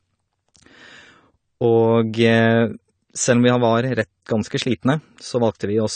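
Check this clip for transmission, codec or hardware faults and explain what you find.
One codec fault is present. Throughout, the speech shows likely AAC compression at a low bitrate, fitting about 32 kbps. The quantiser starves the spectrum, leaving nothing above 9 kHz and a dull, smeared, warbling sound.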